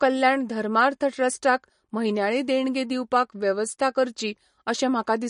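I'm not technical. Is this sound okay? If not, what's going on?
No. MP3 compression damage runs through the whole clip, from start to finish. The speech has a watery, swirly quality, and nothing is heard above 10.5 kHz, so the crisp top end that gives s sounds their sparkle is missing. The likely cause is heavy MP3 squeezing: to save space, the encoder threw away the treble and kept only the parts of the sound it judged most important, leaving the rest flickering and smeared.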